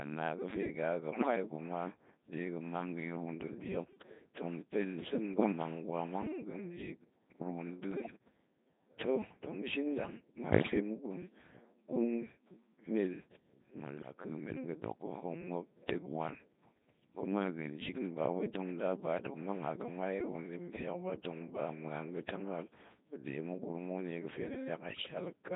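Throughout, the speech passes through a Codec 2 vocoder that rebuilds the voice from pitch, voicing and envelope data, which fits its 2.4 kbit/s mode, so it sounds heavily robotic and buzzy. Bit errors on digital voice radio, at a few percent and up to about 10%, corrupt frame parameters at 1.12–1.36, 5.34–5.52, 7.92–8.20, 10.50–10.80, 13.98–14.14 and 24.90–25.16 s, producing sudden pitch jumps, warbles and bleeps.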